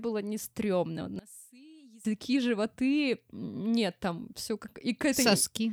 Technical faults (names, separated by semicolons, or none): one channel inverted